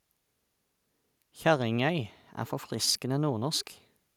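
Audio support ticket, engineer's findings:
No audible faults found in the speech on review; no component implicated and no action required.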